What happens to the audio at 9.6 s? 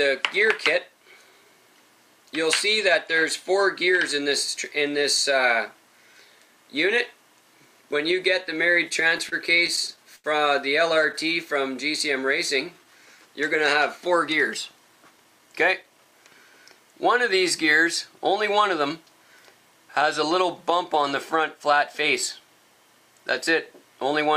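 Packets were arriving late or more slowly than they were being played, so the jitter buffer kept running dry: around 9.6 s the audio is in a run of repeated stalls (stutter) lasting from 8.89 to 10.26 s. Across eleven short gaps, the longest about 83 ms, the receiver stretched the last sound to fill roughly 0.2 s in all, about 15% of that stretch. Nothing is lost, but the sound drags and catches repeatedly.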